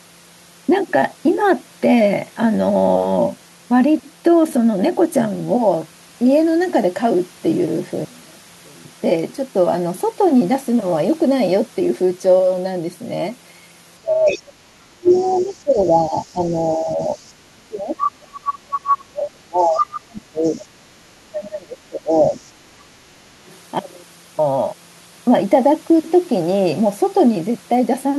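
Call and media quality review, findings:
One channel inverted, 8.05–8.85 s: likely a polarity flip on one stereo leg before the mono downmix. Material common to both channels cancels on summing. Speech drops by about 25 dB for that 0.8 s, leaving only a faint residue of the channel difference.

Speech suppressed in double talk, 13.98–22.39 s: likely the echo canceller failing to separate the near talker from the far-end echo while both sides speak, then attenuating everything. The talker dips and breaks up in pieces, roughly 5 s affected in total, with the deepest cuts near 30 dB.

Other side's voice leaking through, from residual echo the canceller likely failed to remove from the microphone path. The far-end voice comes back at 14.26–14.42 s (about 15 dB under the talker) and 15.07–17.30 s (roughly 20 dB under). Worst at 18.01–18.97 s, near the talker's level. Also at 19.60–20.64 s (about 5 dB under) and briefly at 23.47 s (around 35 dB under).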